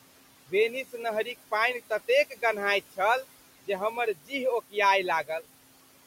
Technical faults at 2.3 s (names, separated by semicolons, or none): noise suppressor artifacts